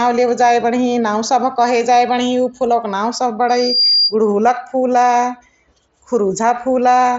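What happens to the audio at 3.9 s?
A loudspeaker feedback squeal runs from 3.48 to 4.15 s: a 4.8 kHz tone swells over roughly a third of a second to about speech level, as the microphone re-amplifies its own loudspeaker output.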